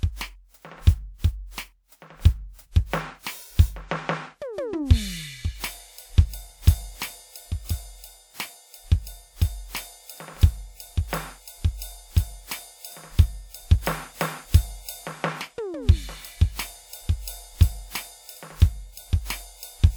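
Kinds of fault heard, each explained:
Generation loss: the music sounds swirly, smeared and hollow throughout, with blurred attacks, worse than one lossy pass would leave. The likely cause is about four encodes, fitting WMA 1 at 96 kbit/s, each stacking fresh quantisation noise.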